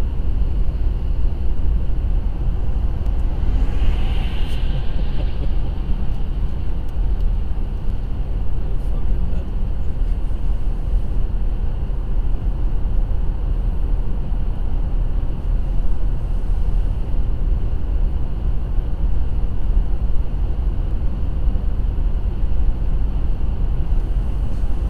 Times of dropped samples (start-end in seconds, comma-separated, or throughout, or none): 3.06, 7.90, 20.91